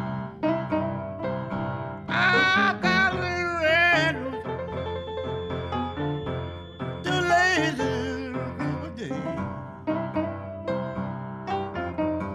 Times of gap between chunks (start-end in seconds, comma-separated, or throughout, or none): none